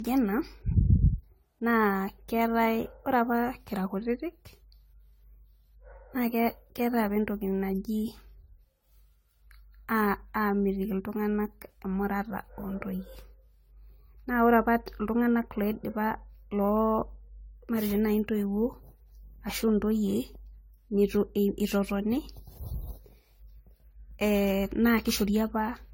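From start to finish the speech carries a swirling, watery texture, with consonant onsets smeared and the spectrum sounding hollowed out, though content still reaches up to 20 kHz. This is generation loss, most likely from repeated lossy encoding, around ten passes, in a chain that points to AAC-LC at about 64 kbit/s. Each re-encode quantised on a shifted frame grid, so noise and spectral gaps compounded beyond what that bitrate alone would produce.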